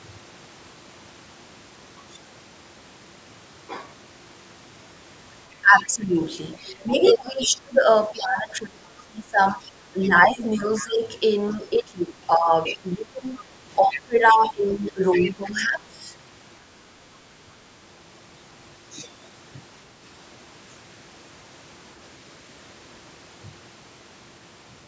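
From 5.61 to 15.98 s the talker's speech is suppressed in double talk. The level dips and breaks up for around seven seconds in total, falling by roughly 20 dB at worst. Both sides were speaking. The echo canceller likely could not tell the talker from the loudspeaker echo, so it turned everything down.

Inside that stretch, the other side's voice leaks through at 5.78 to 5.83, 6.52 to 7.47, 10.7 to 10.87, 11.49 to 11.55, 12.66 to 12.77, 13.9 to 14.48 and 15.11 to 15.51 s. It comes as scraps, about 25 dB below the talker early on and rising to about 15 dB below later. This is likely residual loudspeaker echo the canceller failed to remove.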